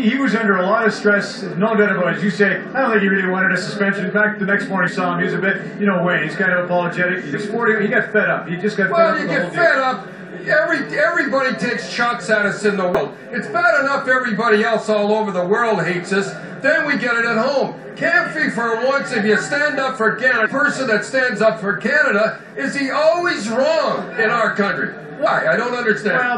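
Damaged data in a compressed stream appears five times: 4.87 to 4.89 s, 7.33 s, 12.95 to 12.97 s, 20.45 s and 25.25 s. Corrupt bytes make the decoder misread frames and lose sync. Each sounds like a brief chirp or blip, about 20 ms long.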